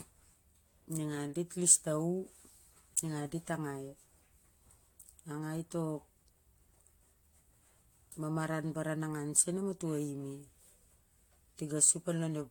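From start to finish, the speech has a swirly, smeared and hollow character. Consonant attacks are blurred rather than crisp. Nothing is present above 19.3 kHz. This is likely generation loss: the audio was decoded and re-encoded with a lossy codec, probably about four times. The band limit fits AAC-LC at around 96 kbit/s. Each new pass quantised the signal again on a shifted frame grid. Noise built up beyond what one encode would leave.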